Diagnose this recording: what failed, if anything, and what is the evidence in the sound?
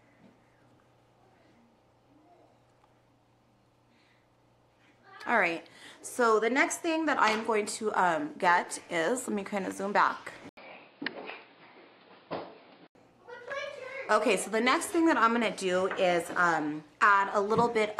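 At 10.49 s the sound drops out for 80 ms, then returns dull and boxy, with nothing above 5.1 kHz and a fresh background noise sitting roughly 35 dB under the signal, while the level stays much the same. It clears again at 12.95 s. The failure sits at the driver or device stage: the input likely switched to a poorer device, such as another microphone or a headset's narrowband call profile, for about two and a half seconds before switching back.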